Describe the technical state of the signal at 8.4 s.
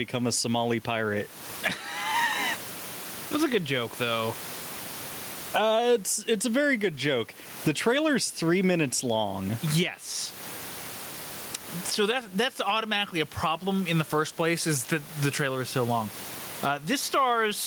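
At 8.4 s you're hearing gain pumping, and it isn't confined to that moment; it runs right through the speech. The level keeps breathing by something like 20 dB, with the room noise sitting about 32 dB under the speech. The likely cause is input gain set way too hot with a fast limiter clamping down on every loud syllable, which leaves the whole thing squashed and flat in dynamics.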